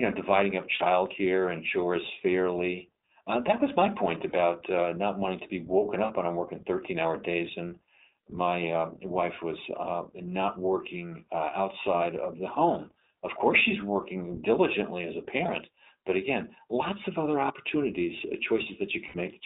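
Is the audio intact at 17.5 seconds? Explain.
No. At 17.5 s the speech jumps forward with no gap, as though a short piece, roughly 70 ms, were cut out and the two edges spliced together. This is likely a dropped buffer (overrun), where the capture software fell behind and the hardware overwrote samples before they were read.

The speech at that moment also carries the iLBC codec's damage: a band limited to about 250 Hz to 3.7 kHz, a plainly rough, synthetic texture, and 20 ms frames coded independently, which fits the 15.2 kbps mode.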